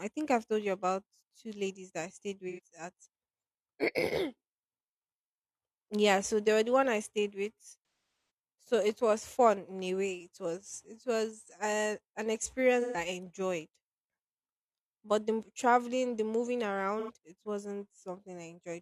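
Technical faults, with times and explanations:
2.49 to 2.60 s, AAC frame loss with concealment: right after "ladies that i stayed", about 85 ms (roughly two frames) gets patched from the previous spectrum, so it smears into a brief noisy blur.
7.79 to 8.30 s, AAC frame loss with concealment: between "one i stayed with" and "so it was fun", losses scattered over half a second, longest run around 300 ms, so the fill-in decays toward silence and fades back.
12.81 to 12.97 s, AAC frame loss with concealment: a 128 ms patch, phasey and smeared.
16.99 to 17.10 s, AAC frame loss with concealment: after "traveling the moving", another 85 ms noisy smear.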